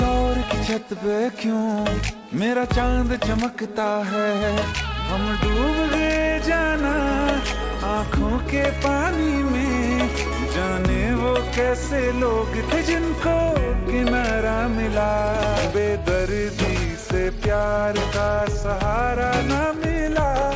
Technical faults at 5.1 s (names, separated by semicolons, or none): none